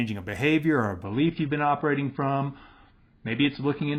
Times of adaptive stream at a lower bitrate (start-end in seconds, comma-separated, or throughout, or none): 1.04-3.98